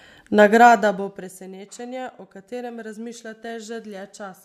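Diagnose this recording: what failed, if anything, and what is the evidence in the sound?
Nothing failed: the speech signal stays continuous and stable throughout, with no audible technical fault at any stage of the chain.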